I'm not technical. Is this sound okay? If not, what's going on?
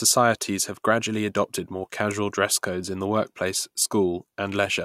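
Yes, this sound is okay, and nothing is going wrong with it.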